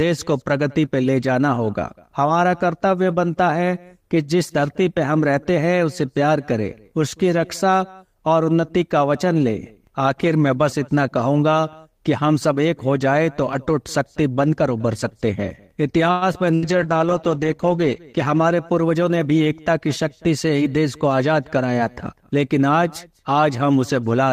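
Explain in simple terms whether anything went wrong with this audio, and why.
Several things go wrong in a cluster near the 16-second mark, in a stretch of about three seconds.

At 16.11 to 16.24 s the sound stalls. The last bit of sound is stretched out for about a tenth of a second, then the audio carries on where it left off. Nothing is lost, but the audio is now running later. This is a call audio freeze, likely caused by data packets being held up on the way.

At 16.33 to 16.37 s there is a brief smear or wobble. This is short concealed packet loss. About 40 ms of sound never arrived in time. The receiver patched the gap by briefly continuing the last sound, then blended back.

From 16.55 to 16.78 s comes a burst of packet loss. Several pieces of audio in a row were lost. The last sound is held and fades, like a dying buzz or hiss. When the audio returns, about 80 ms of it is simply missing.

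From 16.63 to 19.21 s the quality drops. This is a call bitrate drop. The connection seemed weaker, so the sender squeezed the sound into far less data. The audio turns rough and muffled, and it is worst for about a second.

From 18.18 to 19.18 s the sound runs fast enough to sound hurried, about 9 percent quicker at the same pitch. This is a jitter buffer speed-up. Audio had piled up, so the receiver trimmed tiny slices, about a tenth of a second in total, to catch up.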